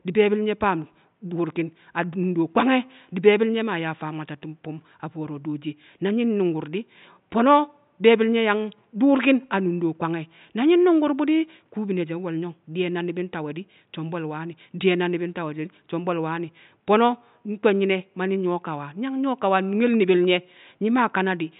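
Nothing stood out on listening to this speech clip beyond a faint room noise that sits about 46 dB below the speech.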